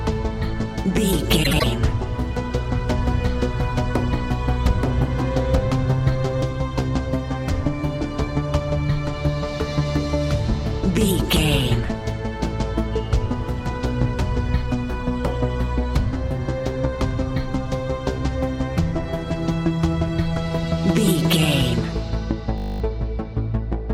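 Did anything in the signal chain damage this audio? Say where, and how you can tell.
Yes, in three places. At the codec or network stage, there are frames out of order between 1.43 and 1.64 s. Two neighbouring runs of about 78 ms each, which fits three codec frames apiece, play back swapped, giving a brief garbled flutter. Unlike a dropout or a repeat, nothing goes missing and the timing downstream stays intact. The content is only rearranged.

From 2.90 to 6.42 s there is a doubled audio track. A second full-band copy trails the original by about a second at roughly equal loudness, then cuts in and out abruptly. It has no decay and no room colouring, so it isn't a reverb tail or an acoustic echo. That points to a likely capture-side or edit fault, such as a second, slower path recording the same signal or an edit that left two copies misaligned.

At 22.58 to 22.80 s there is a system hang loop at the driver or buffer stage. 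A 20 ms piece of audio repeats exactly 11 times, which makes a steady 50 Hz buzz, and around a fifth of a second of real audio is lost. The output device kept cycling its ring buffer while the host stalled. Because the repeats are identical and evenly spaced, this is a frozen buffer rather than packet-loss concealment, which would smooth or fade the gap.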